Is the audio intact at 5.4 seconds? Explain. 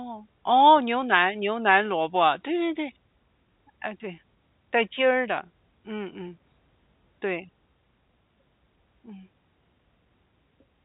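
Yes, the audio is intact at 5.4 seconds, with no dropout, click or other fault at that moment.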